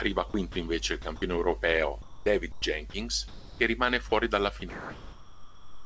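Speech, carried over a call path whose G.722 coding leaves nothing above 8 kHz, is broken up in two distinct ways. From 0.30 to 0.56 s, just before "invece il", and again from 1.02 to 1.22 s, right after it, the sound is chopped by the voice detector. The sender's detector flips between sending and not sending within each stretch, so short pieces of speech give way to comfort noise and return, about 80 ms replaced each time. The same happens from 4.60 s to the end at 5.86 s, where roughly 1.2 s is swapped out.

Between 2.02 and 4.12 s the sound is instead dropped by the voice detector in single clean gaps: 2.02 to 2.26, 2.52 to 2.62, 2.90 to 2.94, 3.28 to 3.60 and 4.10 to 4.12 s. The lost portions run from 20 to 320 ms. Each is one steady patch of comfort noise, with speech resuming only when the detector fires again. The likely cause of both faults is a detector taking quiet speech for background.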